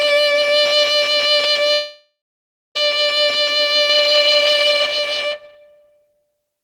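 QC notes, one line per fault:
1.73–2.77 s, long network dropout: The music stops arriving for about a second. The last sound is stretched into a fading buzz, then roughly 0.6 s of near silence. Playback resumes later with that stretch missing. A lost network stream is the likely cause.
3.89 s to end, doubled audio track: A second full-band copy of the music enters abruptly, trailing about half a second behind and roughly 5 dB quieter. It has no decay or room colour. A slower duplicate capture path is the likely cause.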